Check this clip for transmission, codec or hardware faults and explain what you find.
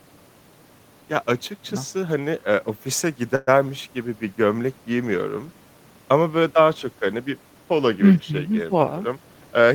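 Two faults turn up in this speech clip, both tied to network timing.

From 3.35 to 3.49 s there is a call audio freeze. For about 120 ms the sound stops advancing and the last fragment is stretched into a fading buzz, likely because packets stalled and the jitter buffer ran dry. Nothing is lost: the speech resumes where it halted, just 119 ms later. On a spectrogram this appears as a short band of smeared, decaying harmonics. In the waveform, a repetitive tail shrinks in amplitude before normal speech returns.

From 9.13 to 9.66 s a jitter buffer speed-up takes over. The buffer had built up more delay than it targets, so the receiver trimmed pitch-period-sized slices again and again, about 70 ms in total. The speech plays at roughly 111% speed with its pitch unchanged and sounds hurried. A spectrogram shows syllables and harmonic tracks packed closer together. In the waveform, the periodic cycles stay the same width while the segments between pauses shorten.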